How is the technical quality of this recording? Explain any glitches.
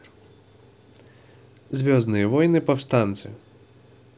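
No glitches are audible anywhere in the recording, so there is nothing to explain.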